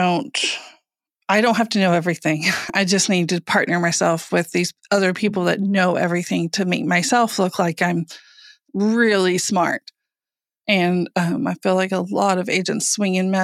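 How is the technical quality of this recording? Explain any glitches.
The recording has two brief glitches, both caused by overlap between stream segments. They fall at 2.70 s and 8.68 s, about 6 s apart, matching 6-second segments. Overlapping timestamps make the player discard about 8 to 17 milliseconds of speech, so the waveform jumps and you hear a tiny click or skip.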